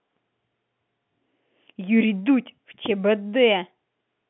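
Speech over a telephone line, with no faults heard.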